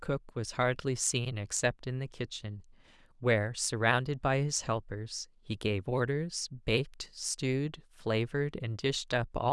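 No technical faults are audible.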